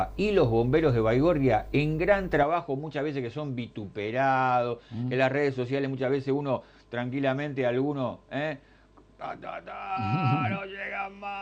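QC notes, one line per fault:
2.43 s to end: input switched to a poorer device (likely cause). From 2.43 s the sound turns duller, with nothing above about 8.9 kHz, and drops by roughly 5 dB. A faint new noise floor, around 50 dB below the signal, appears with no gap at the change. A new band limit, level and noise floor all arriving at one instant points to a different input rather than a filter or codec change, which would leave level and noise untouched.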